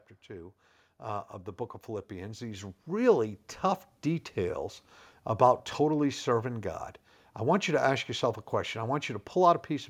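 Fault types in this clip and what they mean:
Automatic gain rising: The gain control judged the input too quiet and turned itself up slowly. From about 0.26 to 3.46 s, the voice and the background noise swell together. The level climbs by about 10 dB over those three seconds.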